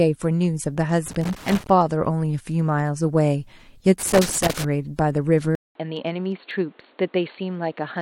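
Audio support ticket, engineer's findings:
Loose connector crackle, 1.07–1.70 s and 4.00–4.65 s: irregular scratchy bursts, probably a worn or dirty contact making and breaking as it moves.

From 5.55 s to the end: short 200 ms dropout, then dull, boxy sound with nothing above 4.4 kHz, about 5 dB quieter, and a new noise floor roughly 30 dB down. Likely the input switched to a poorer device mid-recording.

Tiny skip at 6.51 s: overlap between stream segments. That fits 2 s segments whose timestamps overlap, so the player trims real audio and the waveform jumps.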